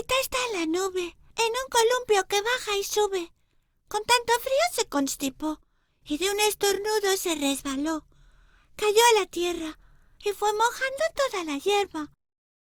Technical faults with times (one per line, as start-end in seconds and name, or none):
none